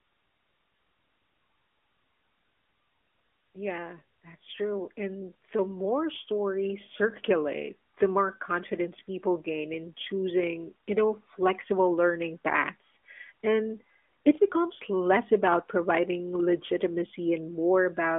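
From 3.52 s to 6.97 s the speech and its background swell together, climbing about 10 dB over roughly three and a half seconds. This is automatic gain rising: the gain control judged the input too quiet and gradually raised its gain, lifting everything alike.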